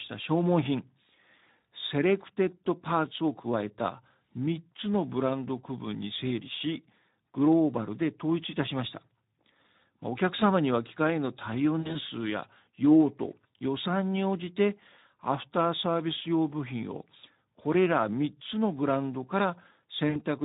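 Throughout, the speech passes through the Speex codec at a low setting, which fits a bitrate of about 11 kbps. With too few bits left for the excitation signal, the voice sounds noisy and hoarse, and this damage is plainly audible.

From 11.79 to 11.98 s, VoIP packet loss concealed by the speech codec removes 100 ms of audio in gaps spread over 160 ms, the longest lasting 60 ms. A second 60 ms gap follows at 20.09 to 20.22 s. In each gap, the decoder extends the last pitch and filter, so the speech smears into a buzzy tone or coloured noise that fades.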